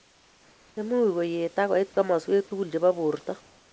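Comfort noise in place of the background fills 0.00 to 0.77 s and again 3.41 s to the end of this speech clip. In both stretches the room's real background gives way to a smooth, featureless hiss, about 4 dB and then about 3 dB quieter. The likely cause is discontinuous transmission: the sender stopped sending during silence and the receiver synthesised shaped noise. Throughout, nothing is heard above 8 kHz, which fits a G.722 wideband call path.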